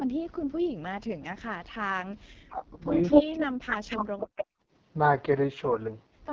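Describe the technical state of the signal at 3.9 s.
At 3.9 s the speech sounds rough, raspy and buzzy, with its top band hissy rather than detailed, and this holds across the whole clip. That texture is the AMR wideband (HD Voice) codec at heavy damage. Its pulse-driven vocal tract model is starved of bits, and the band above 6.4 kHz is only filled with shaped noise. The degree of roughness fits the codec's lowest mode, around 6.6 kbit/s.

The voice is also sunk far down or broken into pieces here. This sits within a stretch from 3.26 to 4.27 s where the level falls by as much as roughly 40 dB. That pattern points to speech suppressed in double talk, likely an echo canceller that could not tell the talker from loudspeaker echo while both sides spoke, and so turned everything down.

Riding on top between 3.70 and 4.02 s is a second, delayed copy of the voice, trailing by 249 ms and roughly as loud as the direct speech. 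This is an echo leak, likely from a loudspeaker on one side whose canceller let part of the microphone pickup through and sent it back down the line.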